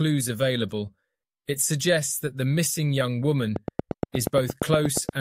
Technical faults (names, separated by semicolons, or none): train of clicks